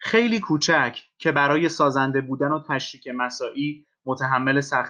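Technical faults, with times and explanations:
The speech signal shows no technical fault at any point, with level, timing and continuity holding steady throughout.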